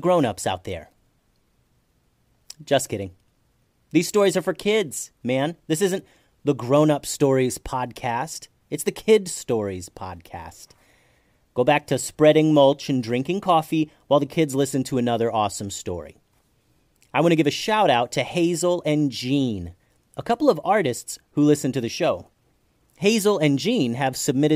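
No technical faults occur at any point in the recording.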